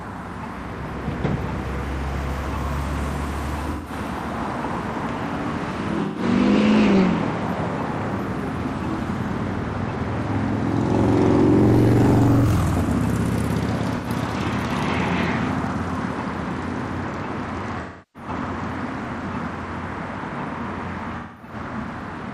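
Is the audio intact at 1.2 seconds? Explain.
Yes, the sound at 1.2 seconds plays through intact, with no dropout, click, distortion or other fault at that moment.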